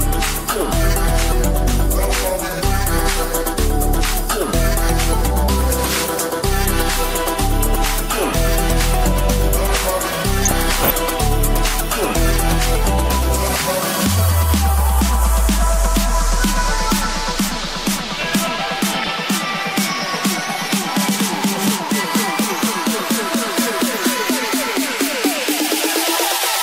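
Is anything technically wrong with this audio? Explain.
Yes. DAB burbling occurs at 10.42–10.90 s, 18.93–19.08 s and 24.72–24.84 s. Weak reception lets bit errors, around a fifth of a percent, slip past error correction into the MP2 data. Corrupted sub-band samples add short blips of noise to single bands, and corrupted scale factors make bands jump in level for up to a frame. The result is burbling noise over the sound rather than the full silence of a dropout.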